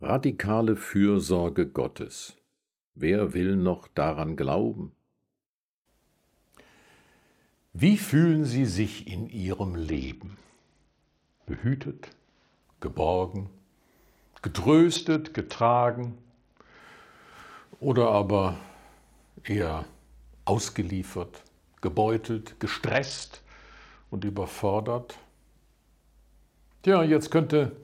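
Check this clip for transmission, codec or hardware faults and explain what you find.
Three faults of one kind turn up in the clip. A Bluetooth SBC bit pool drop occurs at 9.87–12.63 s, 14.96–16.80 s and 22.86–24.27 s. Each time, link congestion forces the encoder to spend far fewer bits per frame, which fits a fall from a bit pool of about 28 to 7, near 66 kbps. The top sub-bands lose their allocation and the remainder are coarsely quantised. Treble goes dull and gritty noise rises, then clarity returns once the rate recovers.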